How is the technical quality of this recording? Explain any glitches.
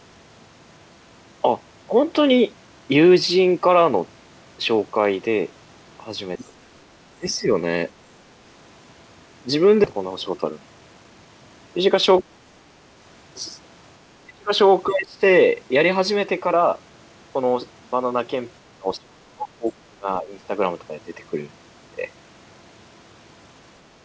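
The recording is a wideband call, with nothing above 8 kHz, which fits a G.722 codec at 64 kbps. It has several glitches: brief echo leaks, repeated dips in the talker's level, one jump forward, and a short hurried stretch.

Other side's voice leaking through happens at 6.38 to 6.44 s and 14.88 to 14.93 s. A faint second voice, about 25 dB and 35 dB below the speech, is likely loudspeaker echo the canceller missed. Unlike background noise, it comes through as a scrap of another talker.

Speech suppressed in double talk occurs at 6.42 to 6.53 s, 7.16 to 7.49 s, 12.21 to 12.27 s, 14.24 to 14.51 s, 14.87 to 15.21 s and 18.60 to 20.34 s. The talker's level drops by up to about 35 dB, most deeply at 14.24 to 14.51 s, likely because the canceller turned everything down while both sides spoke. Timing stays intact, which separates it from a skip.

A skip ahead comes at 9.84 to 9.86 s. Roughly a second of audio is missing, and the two sides are butted together with no fill. 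Unlike the suppression dips, the level holds and time itself jumps.

A jitter buffer speed-up runs from 9.93 to 11.26 s. The receiver was trimming excess buffered delay. It cut many tiny pitch-period pieces, about 200 ms in total, so the sound runs at 114% speed but keeps its pitch. It sounds hurried rather than cut.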